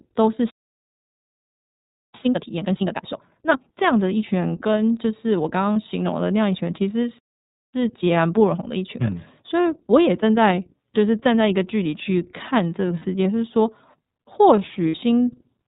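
The whole clip carries iLBC codec coloring: speech cut off above 4 kHz, slightly rough and synthetic, which fits the 30 ms mode at about 13.3 kbps. From 0.50 to 2.14 s there's a playback stall, 1.64 s of silence, likely from the player running dry. A time-compressed catch-up follows until 3.78 s, hurried at 2x with normal pitch. At 5.73 s a 30 ms gap of lost iLBC frames comes out as a brief buzzy held vowel. A second stall runs from 7.19 to 7.74 s, then a milder 1.15x catch-up lasts until 10.74 s. Two more 60 ms losses, at 12.99 and 14.88 s, give the same short breathy smear, and the voice snaps back right after each.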